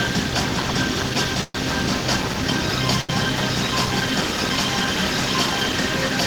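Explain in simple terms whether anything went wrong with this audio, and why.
Two brief hiccups interrupt the sound. From 1.43 to 1.55 s, a call audio freeze, likely from delayed packets, lets the sound fade briefly to near-silence, then resume where it stopped. From 3.01 to 3.10 s, a short stall from a late packet holds the current sound slightly too long instead of fading. Nothing is lost in either case.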